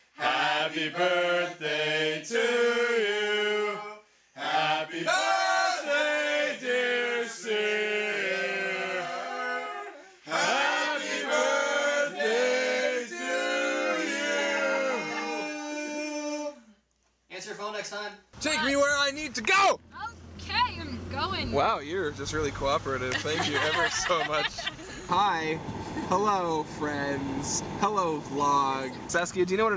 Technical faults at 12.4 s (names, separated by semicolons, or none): none